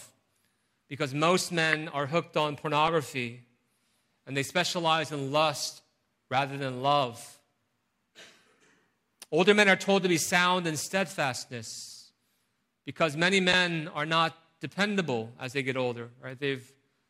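At 1.73 s, 2.87 s after "are hooked on", 4.76–4.78 s between "and they" and "in lust rather than", and 13.52 s after "because many", a corrupt frame decoded gives a short chirp or blip. Bit errors put energy at wrong frequencies across one to a few frames. It sounds like an added burst, and it is loudest at 1.73 s and 13.52 s.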